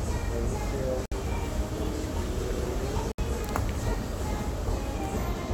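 Separately encoded pieces of this everyday-sound recording were joined without trimming each encoder's start-up delay and final-frame padding, leaving a gap at a join of encoded pieces every 2 s: silent dropouts at 1.06–1.12 s (61 ms) and 3.12–3.18 s (67 ms), with smeared edges before the sound resumes.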